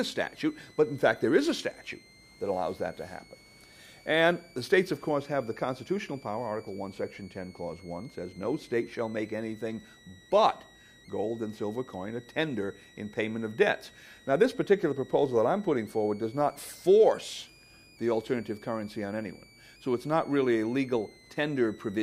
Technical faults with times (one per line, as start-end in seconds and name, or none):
0.00-22.02 switching supply whistle